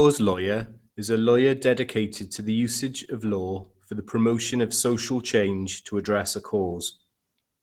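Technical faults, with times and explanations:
Throughout, Opus voice compression: the speech sounds hoarse and faintly robotic, and the top end above 8 kHz is thin and smeared rather than missing. The sound points to Opus in hybrid mode at a low rate of around 16 kbps. In this mode a linear-prediction coder handles the band below 8 kHz, approximating the excitation coarsely, which gives the rasp. A sparse transform layer above 8 kHz keeps only rough spectral energy, which causes the smearing.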